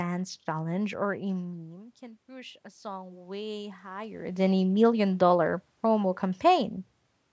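From 1.47 s to 4.34 s, after "challenge or a" and before "than a million dollar", automatic gain rising can be heard. The speech level at the microphone drops by about 17 dB, just after the talker moves away around 1 s, and the gain control slowly adds about 6 dB to compensate. It differs from the talker simply moving because the room noise swells upward together with the voice over these three seconds, instead of staying steady underneath it.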